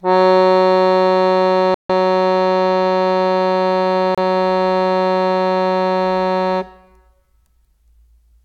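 At 1.74 s the music drops to silence for about 150 ms, then again at 4.15 s for about 30 ms. Both gaps sound like a Bluetooth stall, likely the headphones' buffer running dry while delayed packets were resent.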